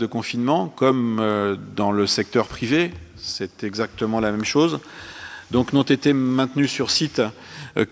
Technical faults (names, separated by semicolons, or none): none